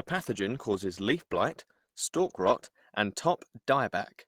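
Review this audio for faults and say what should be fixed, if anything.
Adaptive stream starting at a low bitrate, from 0.0 to 2.78 s. For the opening stretch the speech sounds dull, with the treble thin or synthetic and codec artefacts prominent, which fits a low-rate Opus rendition of around 16 kbit/s. At 2.78 s the quality jumps with no gap, as the player switches to a higher rendition, consistent with around 64 kbit/s, and the top end extends to about 20.4 kHz. To prevent this, start playback on a higher rendition or record the source directly rather than from the adaptive stream.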